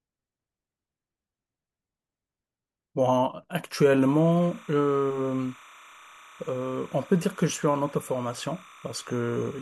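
At 4.01 s, timecode bleed appears and runs to the end of the speech. Linear timecode from a neighbouring track or cable has leaked into the audio path. The code is a square wave that flips between tones around 1 kHz and 2 kHz. Its pattern repeats at 29.97 frames per second. It sits roughly 25 dB below the speech. It is heard as a steady, chirping warble running behind the voice.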